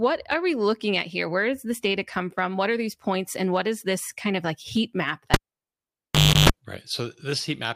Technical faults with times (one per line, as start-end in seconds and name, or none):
5.34-6.50 cable pulled and plugged in